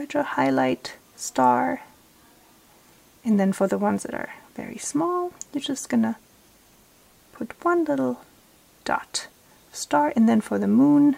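No technical faults can be heard anywhere in the audio.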